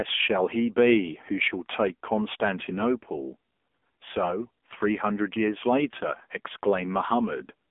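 From start to finish the speech has gone through an AMR narrowband mobile codec, and a heavily squeezed one. Nothing gets above about 3.6 kHz, the low end thins out below 250 Hz, and the voice turns buzzy and synthetic, which points to a low rate around 6.7 kbps.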